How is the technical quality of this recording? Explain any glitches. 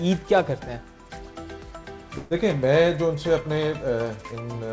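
There is one glitch: a call audio freeze from 2.18 to 2.33 s. The band stops at 8 kHz, which fits a G.722 call codec at 64 kbps.

At 2.18 s the sound stalls. For about 129 ms the last sound is stretched into a fading buzz or hiss. Then the audio resumes exactly where it stopped. Nothing is lost, but everything after runs 129 ms late. The likely cause is delayed packets draining the jitter buffer.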